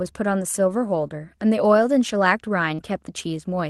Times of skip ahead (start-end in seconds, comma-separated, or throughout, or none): none